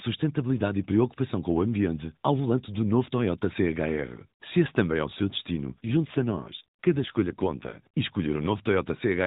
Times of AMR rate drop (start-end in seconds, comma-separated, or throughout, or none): 5.72-7.81